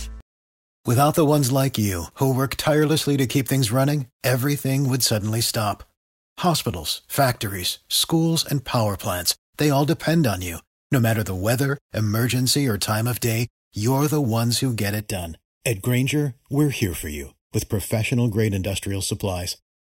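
From 15.00 s to the end, the speech picks up a hollow, phasey colour: that's channel delay, or comb filtering. One channel is running late by roughly 0.4 ms, and when the two get folded down to mono, whatever they share cancels at a set of evenly spaced frequencies, the first notch sitting somewhere around 1.5 kHz. Because the delay stays fixed, those notches don't move, so the tone sounds scooped out rather than swirling.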